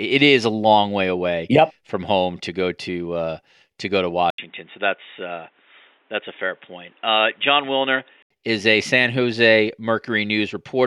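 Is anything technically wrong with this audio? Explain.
Yes. From 4.30 s, right after "uh to go to", to 8.30 s, just before "is a", the speech shows what is likely an input switched to a poorer device. An 80 ms silence marks the switch, then the band stops at 3.8 kHz, as from a narrowband microphone or a headset call profile. Level stays about the same, but the sound turns dull and boxy over a new noise floor roughly 40 dB down, and full bandwidth returns at 8.30 s.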